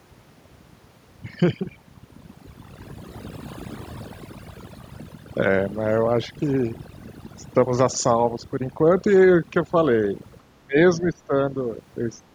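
From the start, the background drops and breaks up into scattered twinkling specks. This is overdone noise removal: a noise reducer set too hard cuts individual frequency bands near its noise estimate, taking quieter parts of the voice with them.

Between 10.61 and 11.34 s, the speech dips and breaks up in pieces, falling by around 20 dB at worst across about half a second in total. This is speech suppressed in double talk, likely an echo canceller turning the talker down because it mistook overlapping speech for loudspeaker echo.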